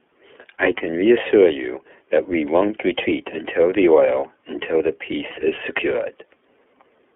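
Throughout this speech clip the sound is thin and boxed in, slightly rough and synthetic, with nothing above about 3.4 kHz and little below 300 Hz. That is the iLBC codec at work. It squeezes the signal into the narrow telephone band and codes each 30 ms block on its own, which leaves plainly audible coding damage. The grain and block length fit iLBC's 13.33 kbps, 30 ms mode.

Twice, from 0.77 to 0.82 s and from 4.20 to 4.24 s, the speech briefly smears into a held, faintly buzzy tone before snapping straight back. These are lost iLBC frames, each gap about one 30 ms frame long. With the packet missing, the decoder fills the hole by repeating the last pitch cycle mixed with noise. Because iLBC frames don't depend on earlier ones, the next frame that arrives decodes cleanly and the speech recovers at once.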